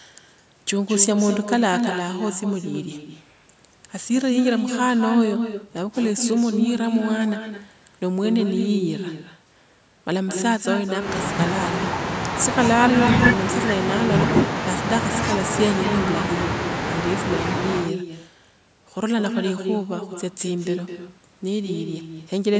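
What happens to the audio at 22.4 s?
At 22.4 s the speech carries an echo with no canceller, as it does throughout. The far end plays the call on a loudspeaker, and its microphone sends that straight back. A thinner copy trails each sound by about a fifth of a second, about 6 dB quieter.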